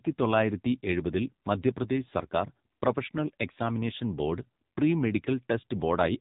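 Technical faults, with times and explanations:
Throughout: AMR narrowband mobile codec. The speech has been squeezed through the narrowband mobile speech coder at a low rate, which fits the 6.7 kbps mode, and the damage is heavy. Everything above 4 kHz is gone, so sibilants and consonant detail are dull and muffled. Each 20 ms frame rebuilds the voice from a vocal-tract filter excited by a few pulses, and with so few bits that excitation is coarse, leaving the voice buzzy and synthetic.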